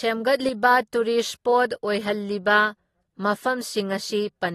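Throughout, the speech has plainly audible AAC compression damage, likely from AAC-LC near 32 kbps. A spectrogram shows nothing above 12.4 kHz and patchy, smeared upper bands.

From 0.40 to 0.49 s, a sudden gain jump of about 6 dB raises speech and background noise together, likely a gain change applied without a ramp. The waveform envelope steps abruptly up, then back.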